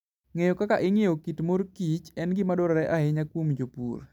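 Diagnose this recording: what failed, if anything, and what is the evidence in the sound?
Nothing has failed here: listening through the speech, there's no audible fault at any point in the chain, so there's simply no evidence to point to.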